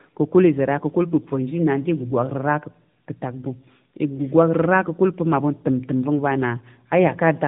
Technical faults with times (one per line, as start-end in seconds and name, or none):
0.00-7.47 tandem speech coding